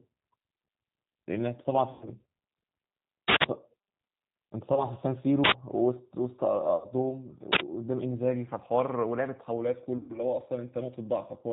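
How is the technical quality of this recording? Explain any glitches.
The technical quality is poor: the whole speech clip is plainly coloured by a low-bitrate voice codec, and it is broken by repeated dropouts and loud bursts of noise.

The G.729 codec is present throughout. The audio is band-limited to nothing above 4 kHz, with a rough, slightly synthetic texture. At 8 kbit/s the speech is rebuilt from a vocal tract filter and a few pulses per frame. That rebuilding gives the sound a buzzy, modelled quality rather than the smeared, swirly artefacts of a transform codec like MP3.

VoIP packet loss concealed by the speech codec occurs at 1.93–2.09 s, 4.75–4.86 s, 6.76–6.88 s and 9.97–10.20 s. The gaps are about 80, 20, 80 and 120 ms, which fits runs of 20 ms packets going missing. In each case the decoder stretches its last pitch and filter into a fading buzz or coloured noise, and the speech stays weak briefly afterwards. 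This differs from a plain dropout, which would be silent.

An uninitialised buffer appears at 3.28–3.44 s, 5.44–5.52 s and 7.52–7.60 s, lasting 160, 80 and 80 ms. Each time, memory that had never been filled with audio was played out, producing a sudden, loud burst of harsh digital noise. Unlike the concealment events, these bursts are abrupt and bear no relation to the surrounding speech.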